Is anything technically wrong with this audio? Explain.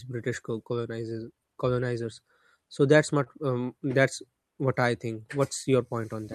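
Yes. The speech carries a steady timing fault with an isolated stall on top of it.

Clock drift between sender and receiver runs through the whole clip. The sending side's clock is slow by roughly 3 percent, so audio arrives a little slower than it is played out and the receiver's jitter buffer keeps drifting toward empty. Unlike random network jitter, this pressure always points the same way, which is why the fixes below are all stretches rather than a mix of cuts and stretches.

Repeated timing corrections appear from 0.10 s to 6.18 s. To keep pace, the receiver repeatedly inserts short slivers of repeated material, playing the speech at about 97 percent speed and adding roughly 150 ms in total. The insertions are unevenly spaced, so instead of a clean, uniform slowdown like a resampled file, the tempo is slightly uneven.

A short stall from a late packet occurs at 3.23 to 3.28 s. One packet missed its slot, the buffer ran dry, and the receiver held the last sound for 25 ms before resuming exactly where it stopped. 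Nothing is lost, which separates it from a dropout or packet-loss gap. Instead a sound lingers briefly with a slight buzz or dip, and the delay after that point grows by 25 ms.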